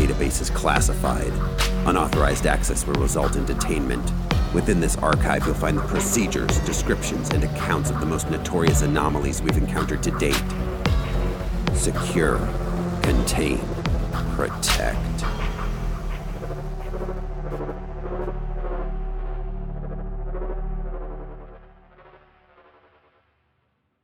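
Nothing here trips the ear as a technical fault; the audio just rolls along without a hitch anywhere.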